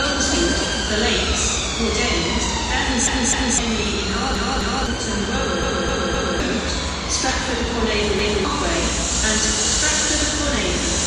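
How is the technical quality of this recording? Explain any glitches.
The recording has four stutters, all from the same fault. Repeated buffer at 3.07–3.58 s, 4.35–4.86 s, 5.63–6.40 s and 8.19–8.45 s: fresh audio arrived late, so the last 256 ms chunk (consistent with an 8192-sample buffer) replayed two, two, three and one extra times. Each sounds like a looping stutter with hard joins, skipping roughly half a second, half a second, 0.7 s and 0.3 s of sound.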